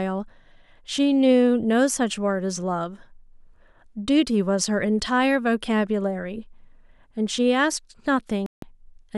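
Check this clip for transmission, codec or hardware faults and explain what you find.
One fault is present: a digital broadcast dropout from 8.46 to 8.63 s. The receiver stopped getting valid frames and muted, so the speech cuts to silence for 160 ms, which fits about five lost frames, then returns with that stretch gone.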